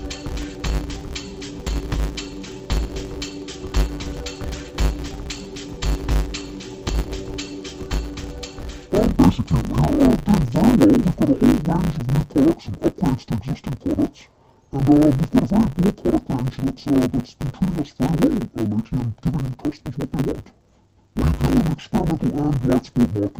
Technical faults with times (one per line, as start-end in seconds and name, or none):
0.00-23.40 interleaved audio read as planar